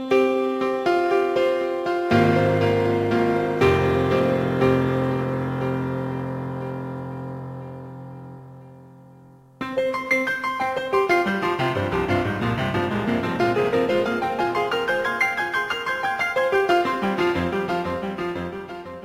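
Crude rate conversion runs through the whole clip, from the first second to the last. The sample rate appears to have been changed by dropping samples, with no smoothing filter. The pattern of discarded samples fits a 48 kHz to 44.1 kHz conversion. Because that pattern cycles at a rate set by the two rates rather than by the sound itself, it adds a gritty, inharmonic fizz that follows louder and brighter moments, sitting roughly 30 dB below the sound.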